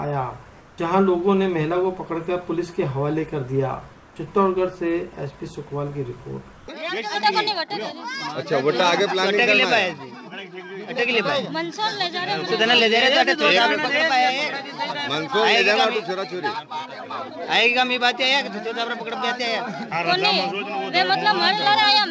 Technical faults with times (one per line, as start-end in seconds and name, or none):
6.56-6.68 comfort noise in place of the background